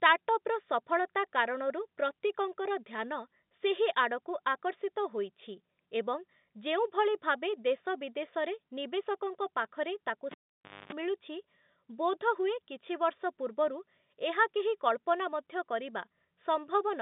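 At 10.31 s the cable is pulled and plugged in. A pop drops the speech to near silence for 0.56 s. While only the tip touches, a 50 Hz mains buzz sounds for 0.25 s. Another pop restores the narrow telephone-band speech at 10.93 s.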